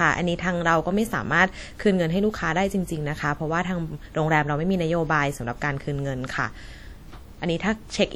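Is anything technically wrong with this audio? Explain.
Yes. Throughout the clip, the speech carries plainly audible damage, likely from WMA compression at a low bitrate, around 48 kbps. Quantisation noise is smeared over long transform blocks. It rings, sounds washy, and leaves a hiss that breathes with the speech. Nothing remains above about 20.1 kHz.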